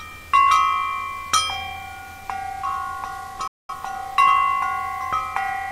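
A digital broadcast dropout hits at 3.47 s: the receiver lost good frames and muted, so the sound fades out within 3 ms, silent until 3.73 s.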